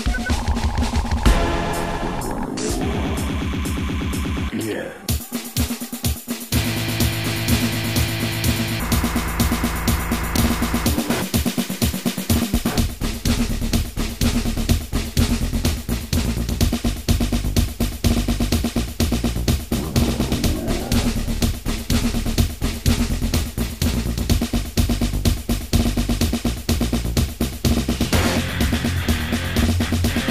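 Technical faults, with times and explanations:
Nothing technical stands out here; the audio just runs along without anything going wrong that I can hear.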